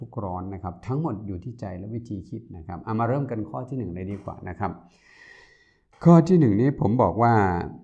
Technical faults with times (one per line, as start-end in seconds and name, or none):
none